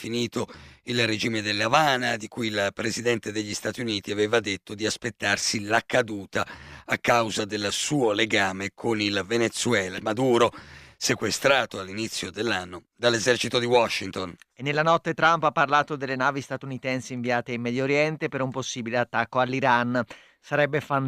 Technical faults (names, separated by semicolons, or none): skip ahead; jitter buffer speed-up